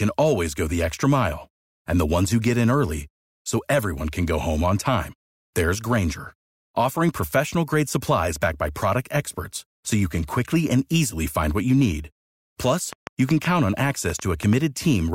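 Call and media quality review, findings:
Train of clicks, 12.93 to 14.54 s in the speech. Roughly seven similar-shaped pops at an uneven pace, averaging 4.4 per second, peaking about 10 dB above the signal. Audible as ticking over the sound. Probable component: likely a faulty connection or power supply or interference from nearby equipment injecting repeated short pulses into the path.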